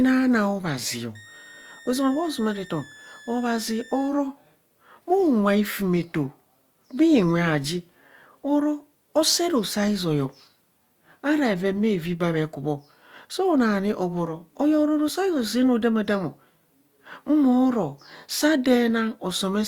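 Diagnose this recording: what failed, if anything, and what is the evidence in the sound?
A switching power supply in the analogue stage is running in an audible burst mode or beating with another supply, leaking a switching supply whistle into the speech from 1.15 to 4.09 s: a high tone moving between about 1.7 and 1.86 kHz, roughly 25 dB below the speech.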